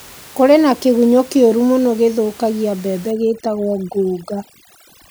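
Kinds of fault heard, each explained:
overdone noise removal: from 3.11 s, after "kĩũru mũno gĩthũkagia mbembe", background falls to twinkling near-silence, from over-strong noise reduction muting frequency bands.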